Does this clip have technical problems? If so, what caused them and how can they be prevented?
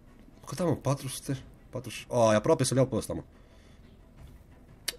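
Yes. A time-stretched section runs from 1.75 s to the end: the audio suddenly plays about 1.48 times faster while its pitch stays the same, so it sounds rushed. The likely cause is software squeezing this stretch to fit a shorter length, keeping the pitch steady by dropping short slices of the waveform. To prevent it, trim or edit the material to length instead of time-compressing it, or keep any stretch ratio close to 1.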